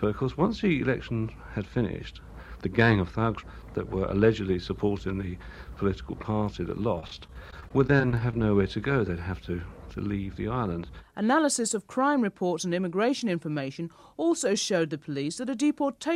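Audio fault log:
6.95–8.44 s, repeated packet loss (robotic sound): audio packets kept going missing or arriving late, leaving around twenty short holes of up to 25 ms. Each hole was bridged by repeating the preceding sound, so about 16% of the stretch is patched, giving a choppy, robotic texture.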